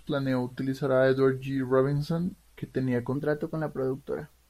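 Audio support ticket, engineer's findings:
Section at the wrong speed, 0.00 to 3.15 s. Speech plays slow and deep, running at 0.89x with pitch about two semitones low. Likely cause is a playback or resampling stage clocked wrong for the source rate. Normal speed from 3.15 s. Distinguishing it: pitch and tempo drop together, unlike a pitch-shift or time-stretch fault where only one moves. The offset holds steady, not wavering like wow.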